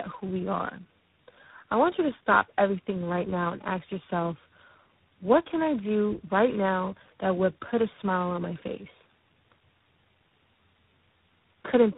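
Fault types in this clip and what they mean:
tandem speech coding: The speech is rough, muffled and warbly, which fits four codecs each re-coding the last one's output. Nothing remains above 3.8 kHz.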